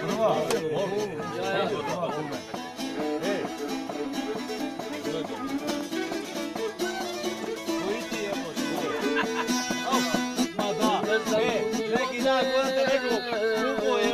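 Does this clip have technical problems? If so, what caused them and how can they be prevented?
No, no technical faults are audible.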